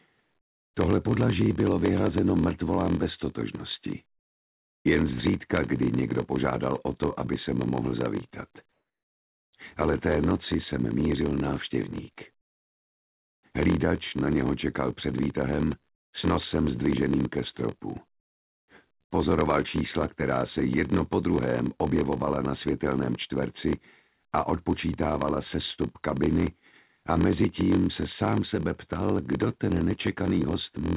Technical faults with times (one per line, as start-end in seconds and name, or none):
0.00-30.97 block size mismatch (padded)
8.72-9.53 comfort noise in place of the background